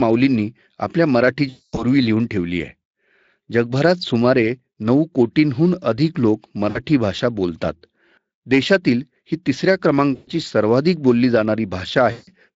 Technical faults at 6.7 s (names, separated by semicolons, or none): VoIP packet loss concealed by the speech codec